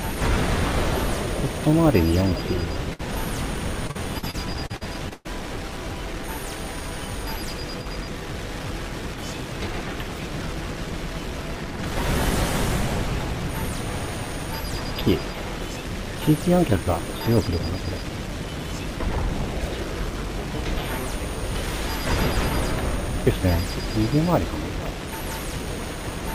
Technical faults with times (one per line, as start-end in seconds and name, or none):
2.93-3.01 burst of packet loss
3.87-5.27 repeated packet loss (robotic sound)